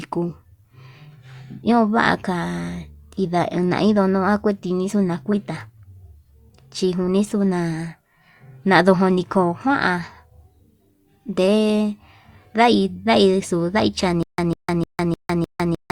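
At 14.23 s the speech breaks into a stutter with silent gaps that runs to the end: a 148 ms fragment repeats five times, each followed by about 156 ms of dead silence, so it ticks every 304 ms. Likely a stalled stream replaying its last chunk.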